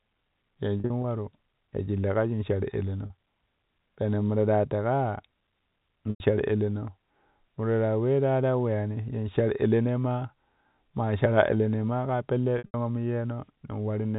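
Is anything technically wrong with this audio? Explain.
Yes. There is packet loss with pitch repetition, at 0.80–1.04 s, 3.06 s, 6.10–6.20 s and 12.58–12.74 s just after "maa ka pella". Lost stretches are bridged by repeating the last pitch period. Short gaps sound like a held buzz. On a spectrogram, these appear as frozen, flat harmonic stripes, and on a waveform as identical repeating cycles. In the 100 ms gap at 6.10 s, the repeated cycle fades to silence before the speech resumes. The telephone band limit means nothing above 4 kHz passes.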